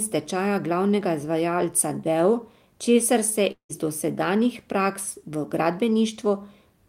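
At 3.51 to 3.71 s the speech smears into a fading buzz, then 100 ms of silence, likely a long network dropout losing 180 ms.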